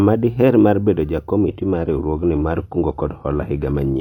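At 1.49 s the speech suddenly steps down in quality and stays that way to the end. That's an adaptive stream switching to a lower bitrate, presumably because the connection slowed. There's no gap. The treble just thins out, with nothing above 14.5 kHz. The change fits a drop from full-rate AAC, around 96 kbit/s, to a low-rate HE-AAC version near 24 kbit/s.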